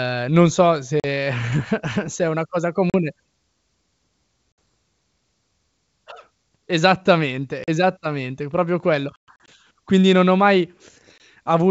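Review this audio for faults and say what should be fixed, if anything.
Packet loss on an ADPCM call cuts hard-edged holes at 1.0 s (after "ehm non so"), 2.90 s (after "se è una cosa"), 4.52 s, 7.64 s, 9.16–9.49 s (about 180 ms lost in scattered gaps, longest 120 ms) and 11.18 s (after "non ho mai"). The decoder's predictor and step size lose track of the sender, so speech resumes slightly distorted and settles within some tens of milliseconds. The waveform shows flat gaps with abrupt edges, and the spectrogram shows blank vertical strips with broadband onset streaks. The G.722 wideband coding around these gaps sounds clean. Preventing this needs jitter buffering with packet loss concealment and a periodic decoder state reset, or redundancy such as forward error correction.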